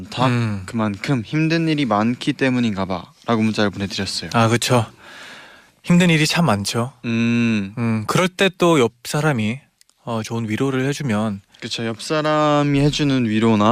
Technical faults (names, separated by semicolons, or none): none